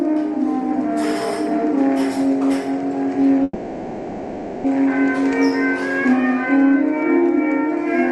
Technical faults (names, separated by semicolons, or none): call audio freeze